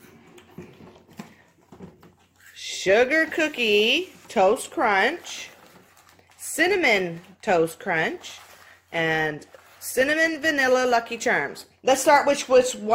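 No technical faults can be heard anywhere in the audio.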